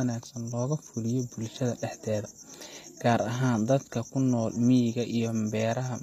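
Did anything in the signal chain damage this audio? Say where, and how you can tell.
Yes. Across the whole speech clip the top end sounds bright but synthetic: the s sounds come out gritty and metallic, sitting loosely on the voice below them, and nothing is present above 14.9 kHz. That points to the codec stage, likely HE-AAC compression at a low bitrate, around 24 kbps by the sound of it. The lower spectrum is coded directly while the treble is rebuilt by copying lower bands upward under a coarse envelope, so its harmonics no longer line up with the real voice.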